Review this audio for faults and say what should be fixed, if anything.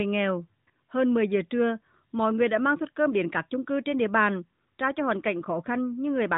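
Nothing here needs fixing. The audio carries the band limit of the AMR narrowband mobile codec, with nothing above 4 kHz and a light coding texture that fits its 12.2 kbps mode.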